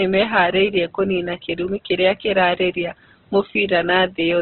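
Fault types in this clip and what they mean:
Opus compression: Nothing above 4.1 kHz survives, and the speech sounds heavily grainy and rough, likely from Opus in its CELT mode at a rate that fits around 12 kbps. On a spectrogram, a flat ceiling at 4.1 kHz sits over noisy, speckled bands.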